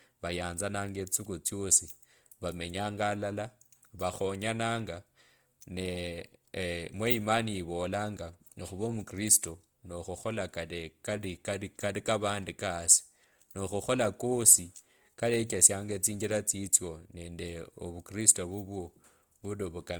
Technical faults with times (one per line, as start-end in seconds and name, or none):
0.00-20.00 Opus compression